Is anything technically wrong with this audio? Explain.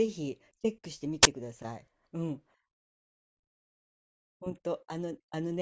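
Yes. This speech clip has one fault: file tags played as audio. From 1.23 to 1.25 s there is a sudden burst of static with hard edges. A block of embedded data, here a compressed cover picture, has been read as if it were audio samples. Compressed data looks random, so it decodes as very loud white noise. The burst is very loud and very short, about 20 ms. It starts and stops abruptly.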